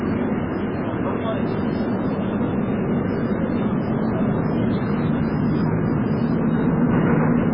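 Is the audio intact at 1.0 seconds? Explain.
No. At 1.0 seconds the sound is damaged, as it is throughout the clip. Nothing is left above 5.2 kHz, and the texture is watery and swirly. Weak frequency components flicker on and off. This is likely heavy MP3 compression, which fits a bitrate near 16 kbps.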